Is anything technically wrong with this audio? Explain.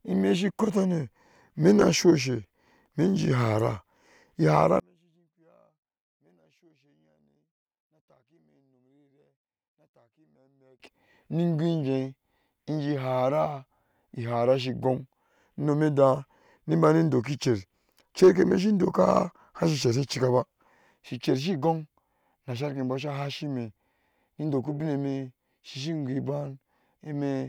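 Yes. From 4.80 to 10.80 s the speech drops by about 37 dB and turns faint. That's likely one channel inverted: with one side's polarity reversed, the shared centre content cancels when summed to mono, leaving only a weak difference signal.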